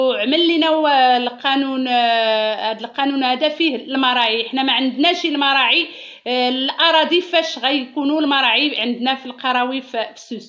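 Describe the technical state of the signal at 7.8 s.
At 7.8 s the signal is intact, with no dropout, clipping or other fault, only the normal call microphone processing that trims the lowest bass and leaves nothing above 8 kHz.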